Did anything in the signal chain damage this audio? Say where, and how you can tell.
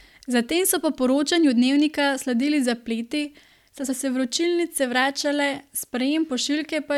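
No, nothing along the chain seems to have done any harm here, and the speech comes across with no damage I can point to at any stage.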